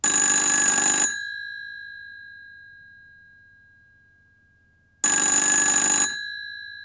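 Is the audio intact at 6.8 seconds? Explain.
Yes, the audio is intact at 6.8 seconds, with no fault audible at that moment.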